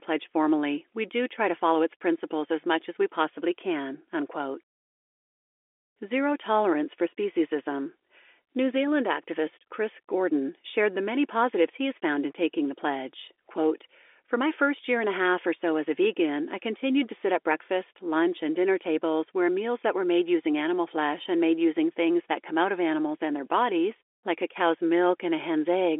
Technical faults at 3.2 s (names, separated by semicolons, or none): none